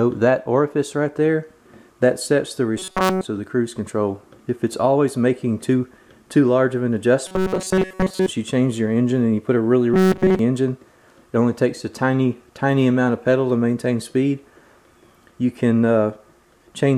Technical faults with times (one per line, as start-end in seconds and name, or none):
2.78-3.23 robotic sound from repeated short buffers
7.27-8.29 robotic sound from repeated short buffers
9.94-10.39 robotic sound from repeated short buffers